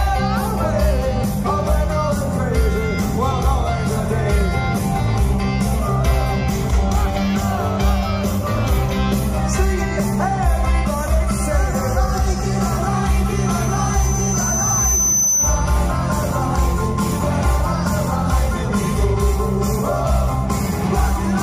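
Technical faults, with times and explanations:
13.36 to 15.81 s, loudspeaker feedback squeal: a single pure tone near 6.1 kHz swells over about two seconds until it sits roughly as loud as the surrounding sound. A microphone is hearing its own loudspeaker, and at that frequency each trip round the loop adds gain, so the tone feeds itself. A spectrogram shows one bright horizontal line that thickens as it grows, and the waveform shows a steadily rising envelope.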